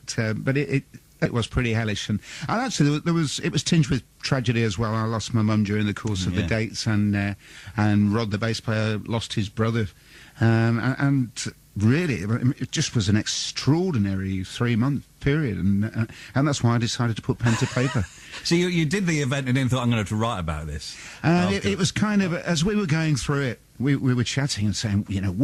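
At 1.25 s the audio makes a skip ahead: around 0.7 s of material is simply gone and both sides are butted together with no gap, unlike a dropout, which leaves silence or fill. From 1.35 to 4.92 s a jitter buffer speed-up follows, running about 109% fast at unchanged pitch, trimming roughly 0.3 s of built-up delay by cutting pitch periods rather than resampling.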